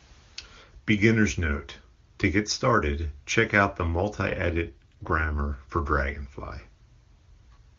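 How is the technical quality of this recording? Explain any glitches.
The speech carries one glitch, an AMR rate drop, over a wideband HD Voice path.

From 4.27 to 5.39 s, between "started check out the" and "for dragonfly", the link weakened and the codec was switched to a lower rate, spending bits on error protection. The band holds with no gap, but the voice turns rough and synthetic, which fits a step from 23.85 down to 8.85 kbit/s, before clearing again.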